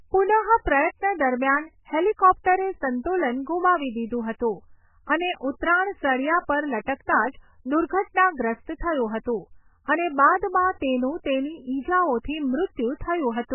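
Throughout the speech, a lossy encoder starved of bits has likely applied heavy MP3 compression, pointing to a very low bitrate, around 8 kbps. It removes everything above 3 kHz and drops weak frequency lines frame by frame, so the sound is dull, watery and swirling, with smeared attacks.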